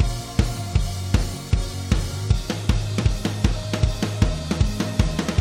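Damaged data in a compressed stream at 0.43 s and 3.01 s corrupts frames the decoder cannot read cleanly, so it loses sync, producing brief glitches in the sound.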